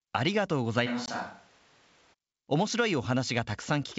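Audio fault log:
0.88–2.12 s: switch to a distant microphone. The sound abruptly turns roomy and hollow, with thinner bass, a level drop of about 5 dB and background noise rising to about 25 dB below the speech, likely because a farther microphone replaced the close one.
1.06–1.10 s: packet loss on an ADPCM call. A hard-edged 20 ms silence, which fits one lost packet, cuts the sound. Afterwards the decoder's predictor and step size disagree with the sender's, so the sound returns slightly distorted before settling.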